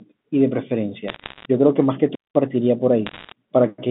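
Bit errors on a digital phone line appear from 1.08 to 1.45 s: flipped bits, at a rate that sounds like around one percent, corrupt individual mu-law samples and scatter sharp ticks and crackle across the speech. A wireless microphone squelch dropout follows at 2.12 to 2.37 s, where the radio signal fades, hiss rises briefly, and the receiver mutes the output for about 200 ms before the speech returns. Bit errors on a digital phone line return from 3.06 to 3.32 s with the same crackling ticks over the band-limited telephone sound.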